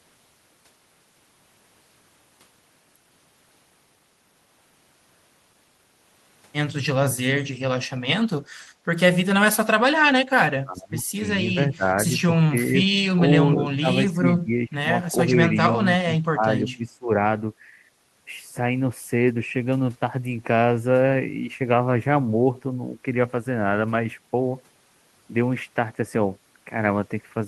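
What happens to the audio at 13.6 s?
At 13.6 s the speech drops away in a case of speech suppressed in double talk. The fault runs from 13.54 to 13.87 s. Within that span the speech is pulled down by as much as about 25 dB, and roughly a fifth of a second is affected in all. It sounds like the speech briefly ducking out. The likely cause is an echo canceller that could not separate the talker from loudspeaker echo while both sides spoke, so it turned both down.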